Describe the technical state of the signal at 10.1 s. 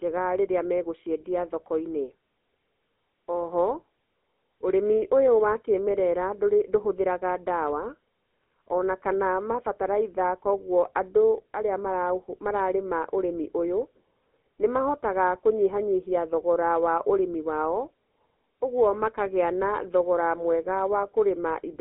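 At 10.1 s the speech sounds buzzy and gravelly, thin and boxed into a telephone band of roughly 250 Hz to 3.5 kHz, with nothing above 3.8 kHz. This is GSM full-rate codec damage, which fits a 13 kbps coder, present throughout the clip. It rebuilds the voice from a vocal-tract model driven by sparse, evenly spaced pulses.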